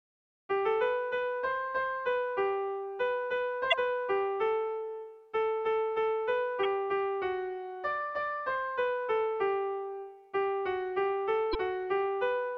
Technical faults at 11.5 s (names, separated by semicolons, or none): damaged data in a compressed stream